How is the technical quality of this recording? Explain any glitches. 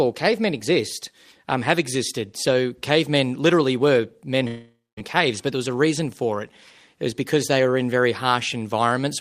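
The speech has one clear break in the middle. A long network dropout runs from 4.47 to 4.99 s, right after "cavemen literally were men". The last sound smears into a fading buzz, then about 0.21 s of near-silence, before "caves but there was" resumes with half a second missing. The likely cause is that packets stopped arriving, so the receiver stretched its final fragment before giving up.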